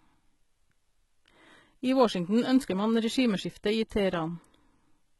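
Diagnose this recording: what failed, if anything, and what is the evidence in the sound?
The codec stage failed. The speech carries heavy coding damage throughout. Nothing sounds above 11.8 kHz. The treble that remains sounds synthetic and coarse. That fits likely HE-AAC compression at a very low bitrate, around 16 kbps, rebuilding the upper band from copied lower bands.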